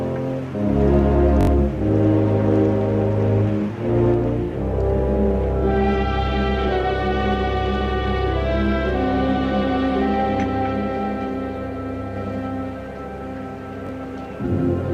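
A hard-edged stutter at 1.41 to 1.47 s, where a piece of about 21 ms plays three extra times, and a single repeat at 13.87 to 13.89 s are a repeated buffer: audio arrived late, so the device replayed its last block, which fits a 1024-sample buffer.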